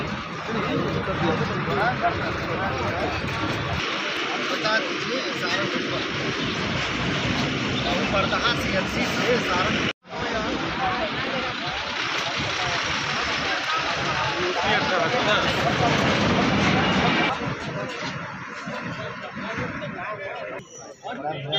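Regular clicks recur every 2.37 s from 1.8 s to 20.75 s, about ten in all. These are clock drift buffer slips, likely from two device clocks disagreeing by around 500 ppm, so roughly 70 samples are dropped or repeated each time. Each slip shows as a thin vertical broadband line on a spectrogram and a small discontinuity in the waveform.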